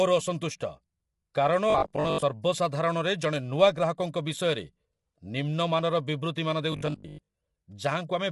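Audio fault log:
Throughout: low-delay AAC compression. The sound is plainly damaged by the codec, with rough, grainy texture and noise filling the gaps between harmonics. Nothing is present above 11.6 kHz. This is likely AAC-ELD, the low-delay codec used in video calls, and the damage fits a bitrate around 32 kbps. Each short frame is coded as a few hundred frequency lines, and too few bits leave those lines coarsely quantised.
1.70–2.22 s and 6.72–7.34 s: robotic sound from repeated short buffers. In both spans the sound turns into a rigid, metallic 50 Hz buzz that only loosely follows the original. About half of the first span and about 70 percent of the second is repeated material. The likely cause is audio arriving too seldom, so the software loops the last chunk while real audio is skipped. A 50 Hz rate fits a 20 ms buffer.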